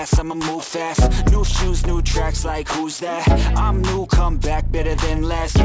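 Aliasing runs through the whole clip: content above 8 kHz was never filtered out before the rate was lowered, which points to a drop to 16 kHz, so it folds back as gritty, metallic tones roughly 20 dB under the signal. Proper filtering would only sound dull.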